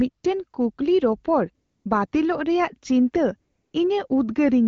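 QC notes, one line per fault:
1.65–1.85 s, 2.07–2.11 s and 3.51–3.73 s, AMR comfort noise: for about 200 ms, 40 ms and 220 ms the real background gives way to a steady, smooth hiss that switches in and out. The phone judged these gaps silent and stopped sending speech frames, so the receiver synthesised noise from a coarse level and spectrum description. Unlike a dropout, the gap is filled rather than dead, and unlike packet-loss concealment nothing is smeared or repeated. The speech between these gaps carries only light AMR wideband coding, as expected at around 12.65 kbit/s.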